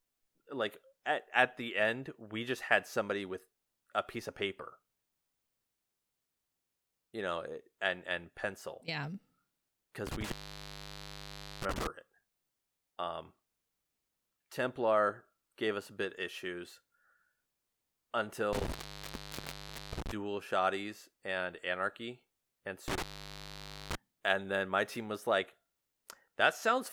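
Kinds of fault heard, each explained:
intermittent contact: a loose connection opens three times, dropping the speech for about 1.3 s at 10.07 s, 1.2 s at 18.53 s before "dual shotties and anarchy", and 0.9 s at 22.88 s after "shotties and anarchy and". The waveform thins to a near-flat band and the spectrogram empties there.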